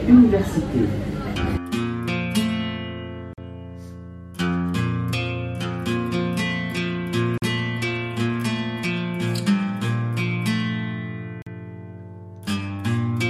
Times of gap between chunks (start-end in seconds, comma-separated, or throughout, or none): 3.33-3.38, 7.38-7.42, 11.42-11.46